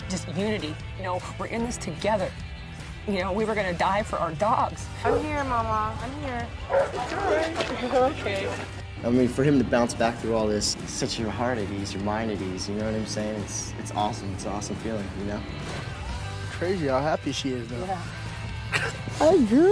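Nothing stood out as a technical problem on listening.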